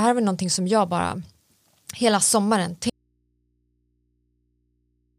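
The signal path likely lost its source at 2.90 s, after "hela sommaren": an audio dropout to a faint residue, leaving only hum about 45 dB down through the end.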